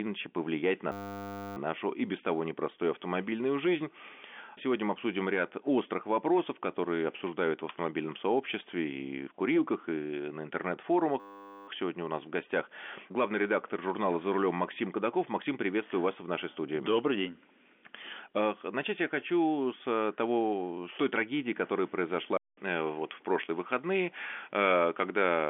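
A system hang loop strikes from 0.92 to 1.57 s, after "иначе повлиять на", and again from 11.2 to 11.68 s. The audio path froze and a single 10 ms slice repeated, giving a steady 100 Hz buzz, with speech resuming at "нашу и без того". At 22.37 s, after "с той трагедии которая", a 200 ms silence leads into a different tone and a new noise floor about 35 dB below the signal, likely an input switched to a poorer device, which lasts to the end, all within the telephone band.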